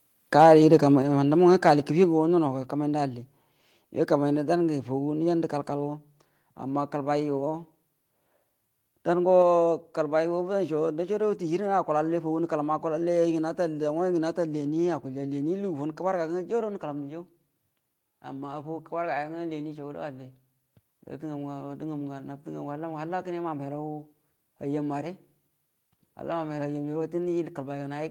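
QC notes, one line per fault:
0.39–0.75 s, microphone overload: the loudest peaks in this stretch have their tops flattened, driven about 3 dB past full scale, with roughly one percent of samples pinned at the limit. The flattened waveform adds a hard, crackly edge to the strongest syllables. The likely cause is microphone input gain set too high, so the converter runs out of headroom on the peaks and cuts them off.
1.02 s and 2.04 s, microphone volume stepped down: the level drops abruptly twice, first by about 5 dB and then by about 3 dB. Voice and background fall together in a single step, with no fade. This is likely the call software's automatic gain control reacting to the overload and lowering the device input volume in discrete steps until the peaks come under the limit.
20.73 s, microphone volume stepped up: voice and background jump together by about 2 dB in one step, mid-signal, with no ramp. 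Because the room tone rises along with the voice, the change was made at the input stage rather than to the voice alone. The call software judged the microphone too quiet and raised the device input volume by one increment.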